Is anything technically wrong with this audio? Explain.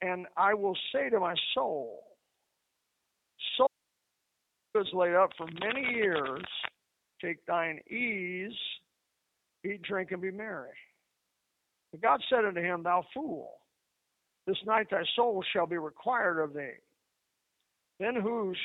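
Yes. Throughout, the speech carries G.729 codec damage: a roughness and synthetic edge consistent with 8 kbit/s frame-based coding, and a spectrogram shows nothing above 3.8 kHz.

From 3.67 to 4.75 s, just before "laid up", an audio dropout to a faint residue leaves about 1.07 s of hiss roughly 50 dB down. The waveform collapses abruptly, most likely from a momentary signal loss.

From 5.31 to 6.69 s, after "laid up", cable scratch noise adds dense, uneven rustling only slightly below the speech, likely from a worn connector. It appears as broadband vertical smears.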